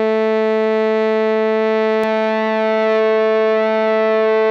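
It's a music clip, and from 2.04 s to the end there's a doubled audio track: a clean, full-band copy trails about 0.7 s behind, roughly 5 dB down, and it cuts in abruptly. That's likely a second, slower capture path or a misaligned edit.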